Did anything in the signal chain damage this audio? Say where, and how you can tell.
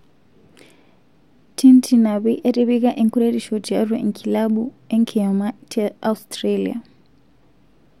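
No, no damage is audible.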